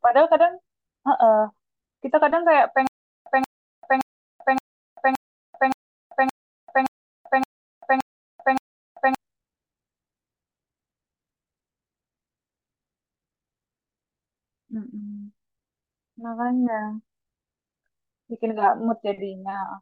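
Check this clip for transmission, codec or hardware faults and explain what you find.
One fault, a stutter with silent gaps, runs from 2.87 to 9.15 s. The stream likely stalled and replayed its last 180 ms fragment at each retry, so that burst repeats eleven times, every 570 ms, with 390 ms of digital silence between, and the speech meant for that stretch is lost.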